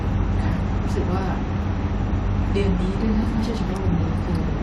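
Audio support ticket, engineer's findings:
Corrupt frame decoded at 0.58 s in speech: brief chirp/blip, peak about -30 dBFS. Probable component: codec decoder accepting bit-damaged frames, a handful hit. Misread gains/codes misplace spectral energy. Frame-length artefact; unlike a dropout, no concealment smear.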